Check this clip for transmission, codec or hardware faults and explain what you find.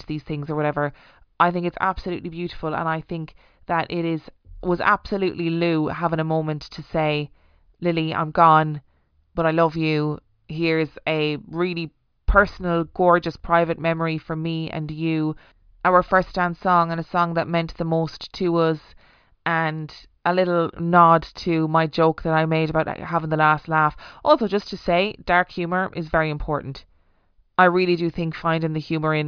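No transmission, codec or hardware faults can be heard.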